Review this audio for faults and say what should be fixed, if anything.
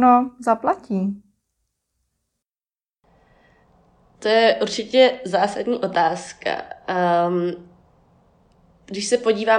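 Nothing here needs fixing; I listened through the whole speech recording and didn't hear any technical faults worth flagging.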